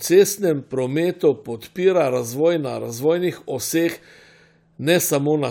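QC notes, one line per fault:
No faults heard.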